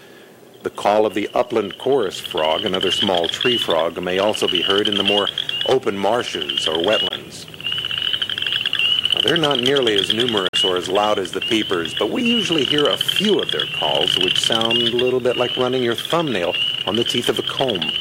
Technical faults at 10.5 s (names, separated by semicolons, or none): Bluetooth dropout